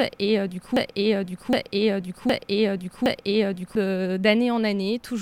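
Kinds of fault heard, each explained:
Broken-record loop: from 0.77 s to 3.75 s the same fragment of about 0.76 s plays four times in a row, exactly and back to back. The likely cause is a stalled player or stream resending its last buffered piece, so the sound due there is missing.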